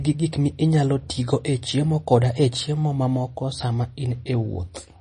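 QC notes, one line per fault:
Throughout, MP3 compression: the speech has a clearly watery, swirly quality and nothing above 9.8 kHz, so s sounds lack top end. It's likely a bit-starved MP3 encoder chopping the treble and letting weak bands flicker on and off, which fits around 32 kbps.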